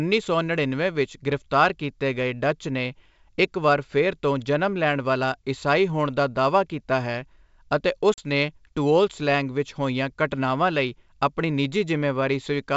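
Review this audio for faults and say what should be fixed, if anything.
At 8.14 s there's a hard-edged gap running to about 8.19 s, classic packet loss on an ADPCM call. Roughly 40 ms went missing, which sounds like a couple of packets, and it got filled with plain silence. The trouble with ADPCM is that the decoder's predictor and step size drift away from the sender's during the hole, so when the speech comes back it lands with a bit of distortion before settling. The G.722 wideband coding underneath stays clean up to its 7 kHz top end. To prevent this, add a jitter buffer with packet loss concealment and resynchronise the decoder state after a gap.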